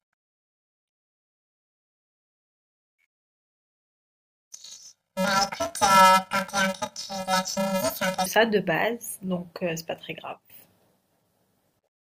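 From 0.0 to 8.26 s the speech has planar audio read as interleaved. Each block is very short, which fits a 128-sample block, so instead of an octave jump you hear a robotic buzz around 375 Hz.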